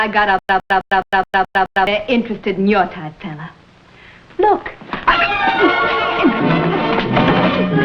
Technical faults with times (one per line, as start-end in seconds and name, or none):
0.39-1.87 stutter with silent gaps